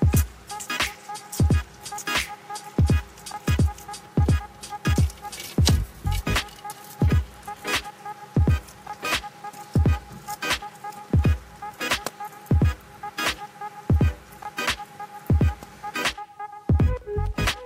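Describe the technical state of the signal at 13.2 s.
At 13.2 s the signal is intact, with no fault audible at that moment.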